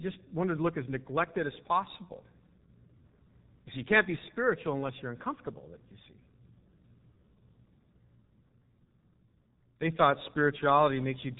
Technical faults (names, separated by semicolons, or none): G.723.1 codec